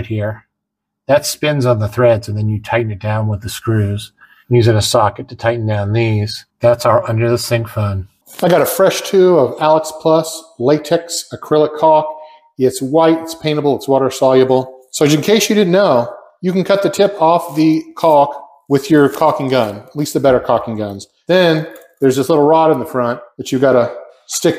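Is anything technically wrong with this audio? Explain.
No, the signal shows no technical faults anywhere in its duration.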